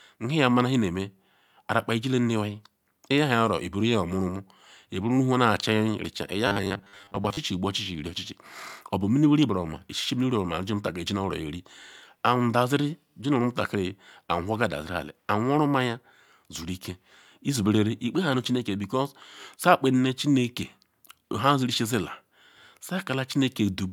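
From 6.47 s to 7.41 s the speech becomes a rigid, metallic buzz at 100 Hz: robotic sound from repeated short buffers. A 10 ms block is likely being replayed while incoming audio is starved, and about half the real signal is skipped.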